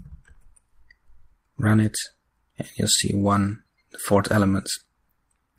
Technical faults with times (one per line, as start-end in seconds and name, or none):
none